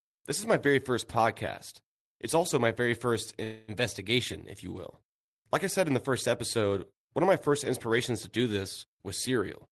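At 3.43 s the speech stops moving forward and hangs as a fading buzz or hiss until 3.71 s. That's a call audio freeze, likely from packets stalling long enough to drain the jitter buffer. The receiver stretched the last sound for about 0.25 s, then picked up exactly where it left off, so nothing's lost, just delayed.

Right at the end, from 9.63 s to 9.71 s, there's a jitter buffer speed-up. The buffer was holding too much, so the receiver clipped out tiny pitch-period slices, around 70 ms in total. The last bit runs at about 169% speed with unchanged pitch, so it sounds rushed. All of this sits on the call path's Opus coding, which tops out around 12 kHz.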